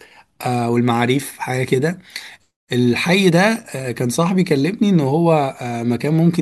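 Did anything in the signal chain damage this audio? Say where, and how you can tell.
No, none of the stages between capture and playback has left any audible damage on this speech recording.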